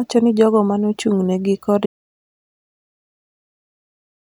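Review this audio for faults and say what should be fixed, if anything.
The input feed was most likely lost, through a disconnected device, failed link or stray mute, while recording carried on writing silence: an audio dropout to silence from 1.86 s to the end, cutting the speech off mid-flow into total silence with no room tone. Secure connections and monitor input levels during capture so a lost signal is caught at once.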